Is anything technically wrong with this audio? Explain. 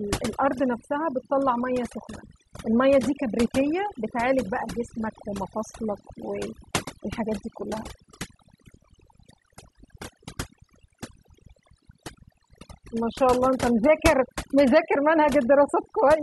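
Yes. Throughout the speech there is overdone noise removal: the reduction was set so aggressively that bands near the noise estimate are pulled to nothing, taking soft speech detail too. Gaps sound near-silent with twinkling specks. A spectrogram shows a black background dotted with isolated bright blips.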